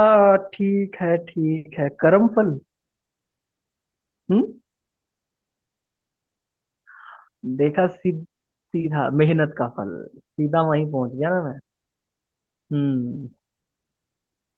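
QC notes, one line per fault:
No faults were found in the speech. Nothing in the recording called for a note.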